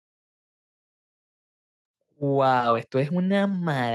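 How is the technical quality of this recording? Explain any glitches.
The recording has one clear fault: automatic gain rising from 2.05 s to the end of the clip. Over those final two seconds the level climbs by about 5 dB as the gain control, having judged the input too quiet, steadily raises its amplification. Because the gain acts on the whole signal, the speech and the background noise swell together rather than the voice alone getting louder, giving a gradual, even lift instead of a sudden jump.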